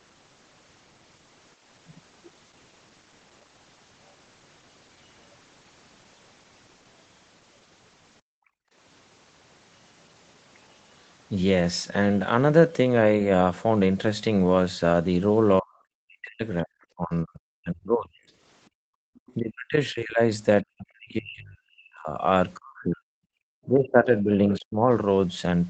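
At 8.21–8.74 s the background is gated by the echo canceller. While the loudspeaker plays, the microphone is pulled down by about 40 dB, so the room tone drops out for half a second. On a waveform the noise floor collapses to a flat line; on a spectrogram a dark vertical band appears.

From 15.61 to 18.29 s the speech is suppressed in double talk. The talker's level dips deeply for roughly two seconds, likely because the canceller mistakes overlapping speech for echo. The spectrogram shows faded speech energy.

The background gating returns at 18.69–19.06 s, again about 40 dB down. Then at 19.15–19.34 s the other side's voice leaks through, a faint scrap well below the talker, likely echo the canceller failed to remove. It shows as weak formant traces.

Double-talk suppression follows at 19.34–23.06 s, pulling down about three seconds of speech. A brief gate at 23.34–23.38 s drops the background by about 32 dB as a thin vertical notch. 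A shallower double-talk dip follows at 23.66–24.89 s, and within it a short, somewhat louder leak of the other side's voice at 24.55–24.59 s shows as a short smudge of foreign energy. Throughout, nothing appears above 8 kHz, which fits the wideband Opus call path.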